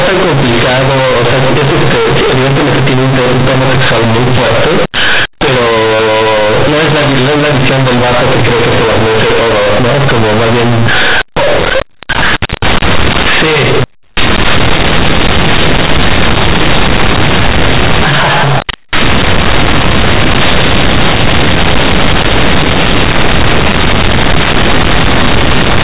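Speech, carried as mu-law G.711 telephone coding and read back as linear 8-bit, so compressed bytes swing across half the range; the waveform looks bent out of shape, with broadband noise filling the pauses.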